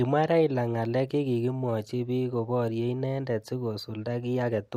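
No technical faults can be heard anywhere in this speech recording, and the signal holds steady throughout.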